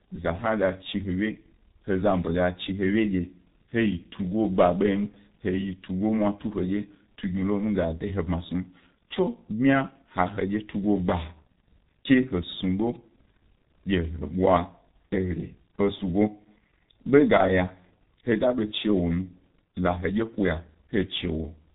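The speech runs through a G.723.1 codec from start to finish, and the damage is heavy: the voice sounds muffled and hoarse, with smeared consonants. The codec frames its model in 30 ms blocks and updates it slowly, so fast transitions blur. The rasp fits a bitrate near 6 kbit/s. On a spectrogram, energy stops abruptly at 3.8 kHz with empty space above, and harmonics look coarse and blocky instead of finely striated.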